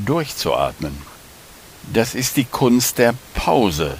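No technical faults are audible.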